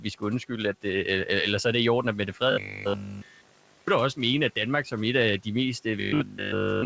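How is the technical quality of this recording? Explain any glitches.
The recording has two kinds of glitch, each appearing twice, over a call path whose G.722 coding leaves nothing above 8 kHz and with room noise sitting about 27 dB below the speech.

Robotic sound from repeated short buffers runs from 2.52 to 3.88 s and again from 6.00 s to the end of the clip. The likely cause is audio arriving too seldom, so the receiver repeats the last 20 ms over and over in place of the missing audio. Nearly all of each stretch is repeated material, and the fixed 20 ms loop imposes a steady 50 Hz buzz, making the speech rigid and metallic while its rough shape still comes through. A codec artefact would not sound like this. Coding noise is spread across the sound, whereas this buzz holds one pitch regardless of the speech.

Speech cut by the noise suppressor occurs at 3.14 to 3.23 s and 6.29 to 6.39 s, both inside the robotic stretches. 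In each, roughly a tenth of a second of speech was mistaken for background and pulled down by about 7 dB, so it sounds swallowed or faint. Unlike the buffer fault, only the level sinks, briefly, and then recovers.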